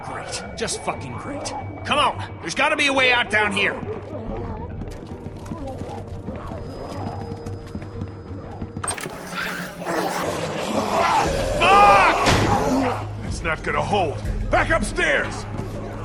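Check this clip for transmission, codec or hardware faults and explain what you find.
One fault is present: a section at the wrong speed from 8.94 to 10.23 s. That stretch runs 1.8 times too fast, most likely from being fitted to the wrong clock, so tempo and pitch rise together abruptly, roughly ten semitones higher, hurried and thin before snapping back.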